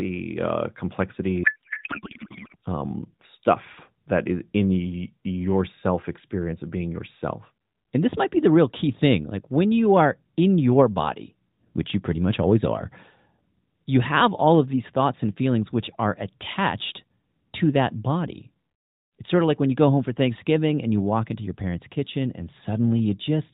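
A codec payload misread runs from 1.44 to 2.56 s. The AMR narrowband stream, which elsewhere carries only light coding damage consistent with the 12.2 kbps mode, is unpacked with the wrong layout: frames packed octet-aligned are read as bandwidth-efficient, so every field is taken from shifted bit positions. The decoder still produces plausible-looking frames, and for that stretch the speech gives way to garbled noise and warble that barely tracks it.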